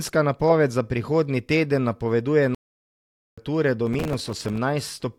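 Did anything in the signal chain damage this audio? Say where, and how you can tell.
Yes. A playback stall runs from 2.55 to 3.38 s. The speech cuts out mid-flow for about 0.83 s, then resumes. The likely cause is the player running dry of data or its thread being blocked, leaving the output silent until it recovered.

Processor overload crackle appears from 3.87 to 4.57 s at the driver or buffer stage. Gritty tearing rides on the speech there. The processor missed dozens of deadlines on buffers of a few milliseconds, each miss repeating a hard-edged scrap of old audio.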